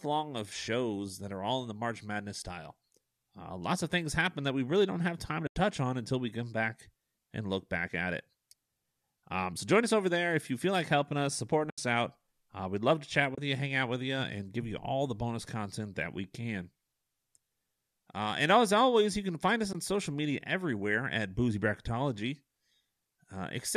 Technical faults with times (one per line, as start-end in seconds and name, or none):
5.46-5.55 AAC frame loss with muting
11.70-11.78 AAC frame loss with muting
13.35-13.38 AAC frame loss with muting
19.73-19.75 AAC frame loss with muting